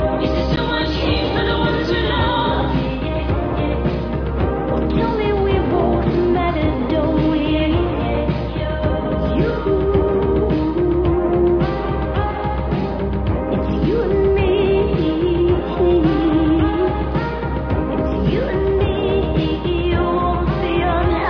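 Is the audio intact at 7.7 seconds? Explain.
Yes, the audio is intact at 7.7 seconds, with no dropout, click, distortion or other fault at that moment.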